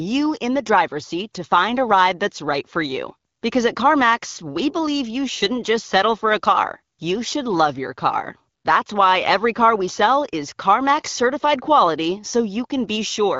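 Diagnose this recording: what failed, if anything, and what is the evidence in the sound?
Nothing stood out on listening: the speech comes across as expected for an AMR wideband (HD Voice) call at 12.65 kbit/s, and no stage in the chain gave any audible sign of failure.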